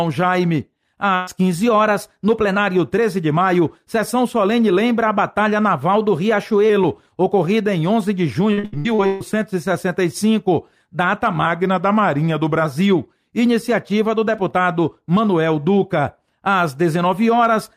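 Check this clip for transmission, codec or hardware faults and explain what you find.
Three kinds of transmission fault are audible: one burst of packet loss, a stretch of repeated packet loss, and three drift correction steps.

From 1.15 to 1.29 s, the sound turns into a held, fading continuation of itself before jumping ahead. This is a burst of packet loss: about 120 ms of audio never arrived, and the receiver stretched the last good sound across the hole instead of leaving silence.

Between 8.53 and 9.22 s, the audio turns choppy and robotic, with pieces missing. This is repeated packet loss (robotic sound): six separate gaps, the longest 138 ms, each patched by extending the preceding sound. More than half of that stretch is fill rather than real signal.

At 1.66 to 2.57 s and again at 5.96 to 6.70 s, the audio suddenly runs about 6% fast and rises roughly a semitone (102 cents), then snaps back. 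From 11.46 to 12.65 s, the reverse happens: it slows by about 6% and drops about 109 cents. Each shift is likely a drift correction step, in which clock-matching software changed the playback rate in one jump to drain or refill its buffer, moving speed and pitch together.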